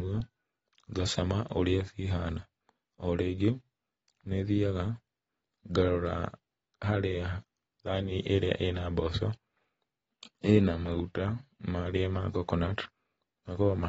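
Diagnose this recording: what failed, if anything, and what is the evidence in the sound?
The fault sits at the codec stage and is most likely AAC compression, present for the whole clip. The speech has nothing above 7.6 kHz, so it sounds dull, and the codec damage is plainly audible as smeared, watery detail. A spectrogram would show a hard ceiling at 7.6 kHz from start to finish. The encoder quantises each frame's frequency lines coarsely and discards the top band, which fits AAC-LC at a low bitrate around 24 kbps.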